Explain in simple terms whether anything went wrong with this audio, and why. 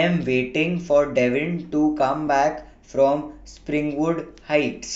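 At 2.28 s the speech briefly freezes. This is an underrun with held sample: the playback buffer ran empty for a fraction of a millisecond, about 0.7 ms, and the output held its last value instead of dropping to zero. Unlike a dropout to silence, the wave just flattens at whatever level it had, so there is no sharp click. Nothing seems to have been skipped, and the speech carries on where it paused.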